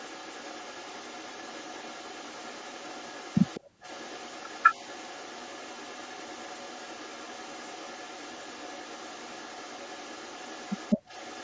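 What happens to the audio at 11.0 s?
At 11.0 s the speech carries an echo leak, present throughout the clip from 0.0 to 11.44 s. A faint second copy of the voice trails the speech by 204 ms, roughly 20 dB quieter. The likely cause is a loudspeaker on the other end whose echo canceller let some of its microphone pickup return down the line. Unlike room reverberation, which smears into a decaying tail, this is a distinct, fixed-delay repeat.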